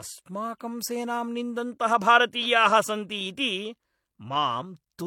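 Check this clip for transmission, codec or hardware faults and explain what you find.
There's one fault, and it runs the whole way through: transcoding between lossy codecs. The speech has stacked, mismatched compression smearing and nothing above 18.5 kHz, likely from an MP3 encode re-encoded to HE-AAC.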